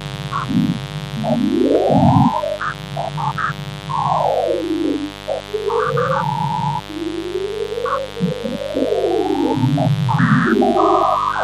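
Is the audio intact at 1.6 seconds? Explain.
No, a steady, raspy mains buzz runs under the sound throughout, well up in level: 50 Hz switching spikes spray harmonics up to several kHz.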